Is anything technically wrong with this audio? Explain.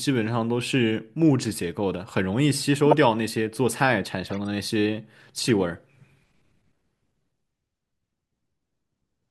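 Yes. The clip has corrupt frame decoded errors at 2.86 to 2.93 s, 4.27 to 4.37 s and 5.44 to 5.48 s. In each case the decoder played compressed frames with flipped bits, so misread gains and codes put energy at wrong frequencies. The result is brief chirps or noise bursts over the speech. The first peaks near about -5 dBFS, and the others are quieter at about -25 and -20 dBFS.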